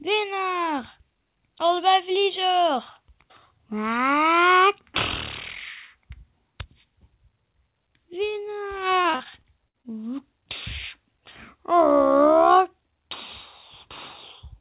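From 9.02 to 9.94 s the audio turns choppy and robotic, with small pieces dropping out. This is repeated packet loss: eight short holes follow one another in quick succession, the longest about 60 ms. Each hole is papered over by stretching out the sound that came just before it, so about 200 ms, some 22% of that stretch, is synthetic fill rather than real audio. Because the fills come back to back, the smearing never settles and the result sounds mechanical. The whole clip is also band-limited, with nothing above 4 kHz, which fits a narrowband call path such as G.711 A-law at 64 kbps.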